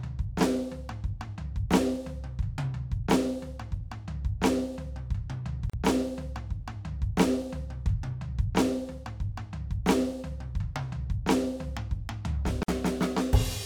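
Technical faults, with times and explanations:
5.70 to 5.73 s and 12.63 to 12.68 s: gap at a join of encoded pieces. The music drops out for 37 ms, then 52 ms. Separately encoded pieces were joined untrimmed, leaving encoder delay and frame padding as silence. The edges are smeared by the codec, and the music resumes where it stopped.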